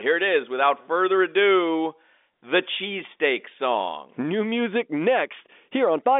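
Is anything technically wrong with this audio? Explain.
No, nothing is technically wrong with this audio; it is speech carried over a standard G.711 telephone line, so nothing above about 3.7 kHz comes through.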